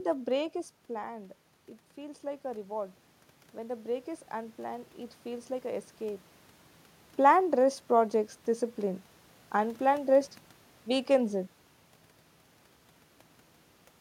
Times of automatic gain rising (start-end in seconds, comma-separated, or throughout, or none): 3.56-6.31